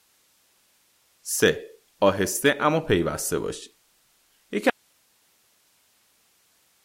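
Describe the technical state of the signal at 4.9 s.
At 4.9 s the speech is gone, leaving only a thin bed of hiss roughly 40 dB below the normal signal level. This is an audio dropout to a faint residue that begins abruptly at 4.70 s and runs to the end of the clip. The likely cause is a break in the wanted signal while the path after the break stayed live, so only its own noise carries through. The cut is sudden, unlike a pause or fade.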